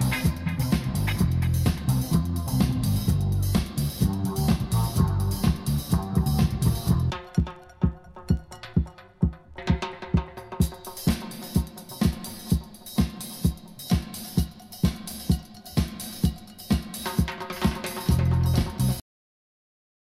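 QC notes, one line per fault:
19.00–20.20 s, cut-off end: the sound stops abruptly mid-event at 19.00 s and falls straight to digital silence for the last 1.2 s, because the final buffers were never written. There is no decay tail, unlike a fade-out or natural ending.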